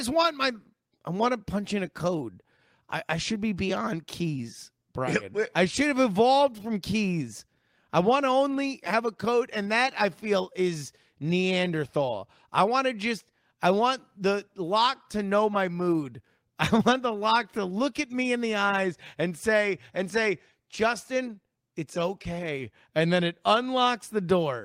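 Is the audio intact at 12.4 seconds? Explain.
Yes, the speech at 12.4 seconds is intact, with no dropout, click, distortion or other fault audible at that moment.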